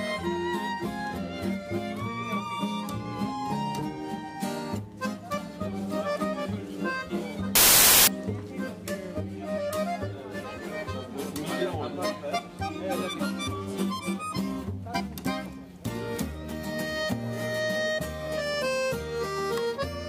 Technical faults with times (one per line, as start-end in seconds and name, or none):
7.55-8.07 samples built from the wrong bytes